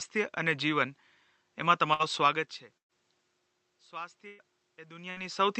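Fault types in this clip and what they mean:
Burst of packet loss: At 1.93, 2.77, 4.27 and 5.10 s, a held buzz or fading hiss briefly replaces the speech, which then resumes with 60 to 120 ms skipped. Lost call packets were concealed by extending and fading the last sound.
Automatic gain rising: From 3.90 to 5.43 s, voice and room noise swell together slowly by about 4 dB. The input had dropped by about 21 dB, so the automatic gain control raised its gain gradually to compensate.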